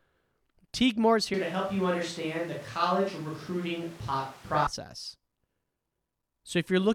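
From 1.34 s to 4.67 s the close microphone likely drops out, leaving a distant microphone in its place. The speech suddenly turns roomy, hollow and thin in the bass, with room noise about 25 dB below it, at an unchanged level, before snapping back.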